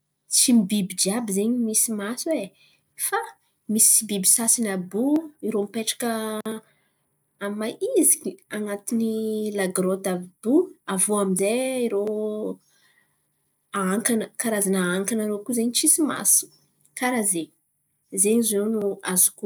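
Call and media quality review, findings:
Two bit error spikes in the speech: single sharp ticks at 3.82 s and 14.62 s, broadband and unrelated to the audio around them. Probable component: memory or a digital link somewhere in the chain. Mechanism: one flipped bit jumps a sample by a power of two, then it snaps straight back. The first lasts two samples, the second three, so each is over almost instantly. Worth checking for a flaky interface.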